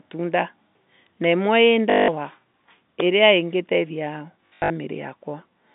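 Packet loss with last packet repeated at 1.9 to 2.08 s and 4.46 to 4.7 s: lost packets were replaced by repeats of the previous one, giving robotic stutters buzzing near 50 Hz, which fits 20 ms packets.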